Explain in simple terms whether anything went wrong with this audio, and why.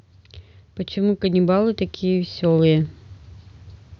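From about 0.93 to 2.99 seconds the speech and the background around it swell louder together, slowly and steadily. That's automatic gain rising: the recorder decided the input was too quiet and kept turning its own volume up over those two seconds.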